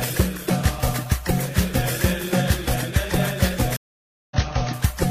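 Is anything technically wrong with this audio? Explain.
Yes. A stream reconnect occurs from 3.77 to 4.37 s: the connection dropped, leaving about 544 ms of silence while the player reconnected and restarted its decoder. Playback resumes roughly half a second further along, so that stretch of sound is skipped.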